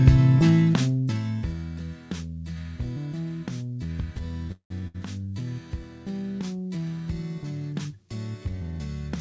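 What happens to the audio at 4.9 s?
A burst of packet loss hits at 4.87 to 4.96 s. A run of packets never arrived in time, so the receiver stretches the last sound into a fading buzz or hiss for about 70 ms. The audio then jumps ahead, with roughly 60 ms gone.

Just before, from 4.52 to 4.82 s, the same tail-and-fade sound is heard for about 180 ms, ending in about 100 ms of silence. It is likely a call audio freeze, where delayed packets drained the jitter buffer. Playback then resumes where it stopped, with nothing lost.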